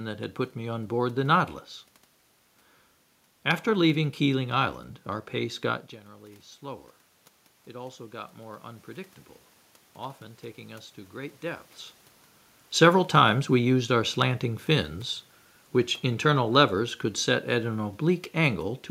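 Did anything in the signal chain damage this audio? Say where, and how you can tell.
Yes. Automatic gain rising in call processing. From 5.37 to 11.71 s, voice and room noise swell together by about 7 dB, compensating a roughly 17 dB drop when the talker moved back.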